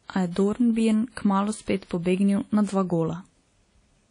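Speech with plainly audible WMA compression throughout: nothing above 10.1 kHz, and a washy, ringing hiss that tracks the signal, likely from a low-bitrate encode.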